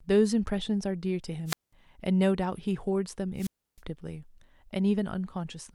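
Speech with two wireless microphone squelch dropouts, at 1.46 to 1.73 s (a mute of about 197 ms) and at 3.36 to 3.81 s (about 311 ms). Each time, the radio link from an analogue FM microphone fades, hiss rises briefly, and then the receiver's squelch cuts the output to near silence until the signal recovers. That surge of static before the gap sets it apart from a digital packet dropout or an edit, which fall silent abruptly with no noise first.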